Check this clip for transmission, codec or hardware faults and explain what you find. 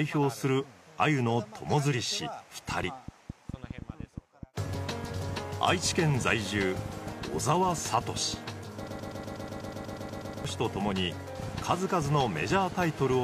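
Two faults are audible.

Compressed frames skipped, 5.07 to 5.11 s: the decoder never plays a run of frames that were missing or rejected as damaged, so the audio jumps ahead by about 150 ms, which fits three 46.4 ms frames.

Broken-record loop, 8.88 to 10.45 s: the likely cause is a player, encoder or stream stalling and resending the last fragment it held. A 122 ms piece repeats 13 times back to back, and the audio that should have filled that span is lost.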